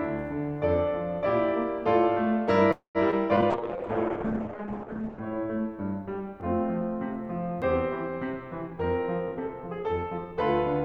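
At 2.71 to 2.98 s, the music stalls in what is likely a call audio freeze, with packets held up and the jitter buffer running dry. The last sound is stretched into a fading fill, with about 120 ms of silence, adding a 233 ms gap before the music resumes where it stopped.

Short concealed packet loss follows at 3.11 to 3.15 s, 3.36 to 3.40 s and 3.41 to 3.45 s. Each time, about 40 ms failed to reach the decoder, and the patched-over holes come through as brief smears or wobbles.

From 3.53 to 5.29 s, a call bitrate drop cuts the encoder from 96 kbps to 8 kbps for about 1.6 s. The band narrows from 20 kHz to 8 kHz, so the music turns coarse and muffled.

Overlapping this, a jitter buffer slow-down from 3.60 to 4.90 s rebuilds the reserve by repeating pitch periods. It adds 94 ms, and the music plays at 93% speed at unchanged pitch, drawn out.

At 9.28 to 10.32 s, a jitter buffer speed-up trims excess buffered delay, cutting roughly 150 ms. 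The music runs at 116% speed and sounds hurried, its tempo no longer steady.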